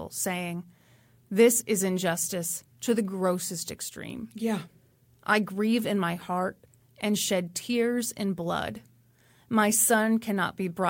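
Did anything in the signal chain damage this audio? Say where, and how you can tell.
Yes: a bit error spike at 4.10 s, a single-sample tick at about -29 dBFS, from one flipped bit in memory or a digital link.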